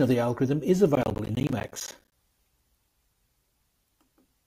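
Just after "of the algorithm is", from 0.95 s to 2.12 s, the speech breaks into a burst of processor overload crackle. The processor repeatedly failed to deliver its audio buffers on time, and each miss left a short hole of silence, around 10 ms, dozens of them in quick succession, so the voice sounds torn and gritty. On the waveform this shows as frequent flat gaps with abrupt edges; on a spectrogram, as a dense run of thin vertical broadband stripes.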